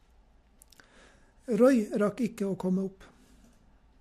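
No technical faults can be heard anywhere in this speech recording. There is nothing to mark at any point in the timeline.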